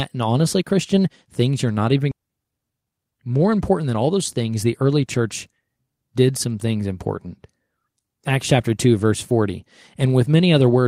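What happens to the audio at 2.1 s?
Right after "things you're not even", a skip ahead at 2.11 s drops about a second of speech and splices the sides directly, with no silence, unlike a dropout. From 2.16 to 4.18 s, jitter buffer speed-up trims pitch-period slices, about 0.4 s in total, so speech runs at 121% speed with unchanged pitch until "things the early church".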